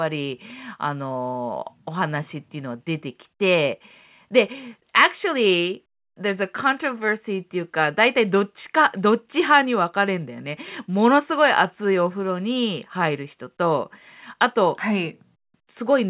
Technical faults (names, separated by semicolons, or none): none